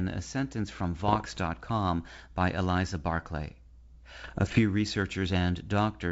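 From 1.04 to 1.39 s, just after "a sentence from", and again from 4.24 to 4.61 s, bit errors on an ADPCM link, at roughly 0.7 and 1 percent, disrupt the decoder's step size and predictor. This produces pops and rough bursts that linger briefly rather than clicking cleanly like dropouts.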